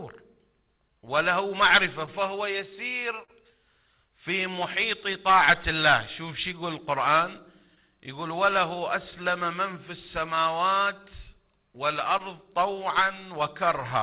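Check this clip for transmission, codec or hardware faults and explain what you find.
Yes, there's a clock problem plus some packet loss, all heard through a G.711 mu-law call path that leaves nothing above 4 kHz.

Clock drift between sender and receiver runs through the whole clip. The sender's clock is running roughly 2% slow, so the receiver's jitter buffer keeps draining and has to be topped up. You hear that as faint, uneven timing hiccups scattered across the audio.

Repeated timing corrections run from 0.89 to 13.66 s. To stay in step, the receiver keeps repeating short slivers of audio, stretching things to about 99% speed and adding somewhere around 150 ms in total. The edits are small and irregularly spaced, so the tempo feels slightly unsteady.

Scattered short gaps turn up at 2.06–3.30 s (about three), 5.13–6.29 s (about four) and 9.11–12.21 s (about seven). Lost or late packets were patched by carrying the last sound forward, each for a few tens of milliseconds at most, giving brief ticks or smears.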